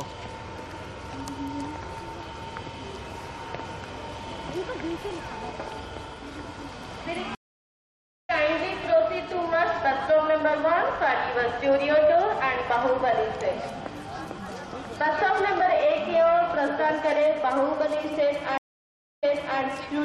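The audio has two stream reconnects. At 7.35 s it goes silent for 0.94 s, then resumes at 8.31 s about a second further on, so a stretch of material is skipped. At 18.58 s it drops out for 0.65 s and returns 0.37 s earlier than where it stopped, repeating a short stretch before running on to 19.60 s. Each time the connection broke and the player restarted its decoder mid-stream.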